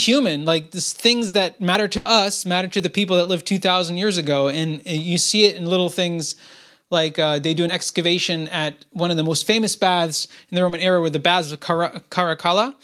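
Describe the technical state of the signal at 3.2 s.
At 3.23 to 3.27 s there is a short concealed packet loss: about 20 ms of audio failed to arrive and was synthesised by extending the preceding sound, then crossfaded back. It is heard as a brief smear or wobble; a spectrogram shows a flattened, repeated-looking patch.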